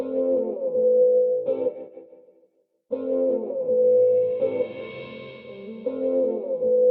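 No technical faults are audible.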